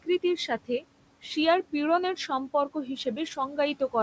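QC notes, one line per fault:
throughout: noise suppressor artifacts. The room noise, sitting about 17 dB under the speech, is pulled down by about 18 dB between phrases and swells back under them. Unlike a speech cut, the background pumps while the speech keeps its level.
0.03–0.84 s: speech cut by the noise suppressor. The suppressor mistook quiet stretches of speech for noise, totalling roughly 150 ms, and dipped them by up to about 16 dB, so soft sounds come out swallowed. Unlike a dropout, the speech fades rather than stopping dead or clicking.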